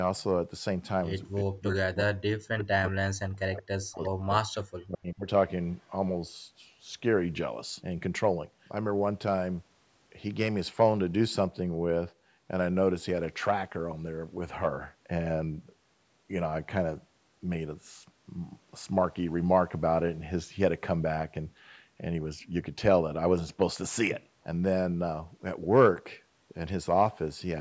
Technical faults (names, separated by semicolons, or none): speech suppressed in double talk; echo leak